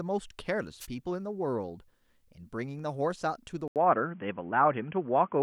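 At 0.79 to 0.87 s, a wireless microphone noise hit: the radio link fades for about 75 ms, and receiver noise rises as a brief swish of static. A spectrogram shows a narrow vertical smear of broadband noise; the waveform shows a short, fuzzy burst.

From 3.68 s to the end, the sound turns abruptly dull and boxy, with nothing above 3.4 kHz. An 80 ms silence comes at the change, then a small level shift and a new, faint background noise. The likely cause is the input switching to a poorer device. A spectrogram shows the upper band cut off flat; the waveform shows the gap.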